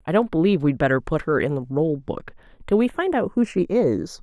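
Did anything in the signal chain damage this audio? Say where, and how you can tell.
Yes. The damage is at the converter stage: the channels are drifting apart throughout the speech because each runs on its own clock, off by roughly 70 ppm. The inter-channel delay grows to a fraction of a millisecond, sweeping comb notches slowly and producing a slow flanging.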